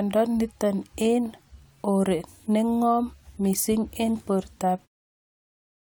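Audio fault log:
No faults found; the speech ends on a smooth, editor-style fade-out near 5 s.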